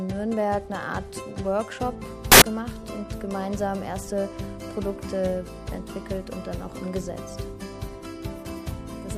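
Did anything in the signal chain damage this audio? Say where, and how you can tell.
Yes: at sample-format conversion, 2.32 to 2.42 s becomes loud, harsh broadband noise, samples built from the wrong bytes, with misaligned or swapped bytes putting the noisy low bits in the high positions.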